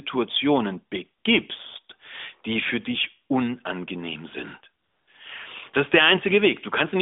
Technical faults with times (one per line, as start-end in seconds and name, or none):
4.84-5.08 AMR comfort noise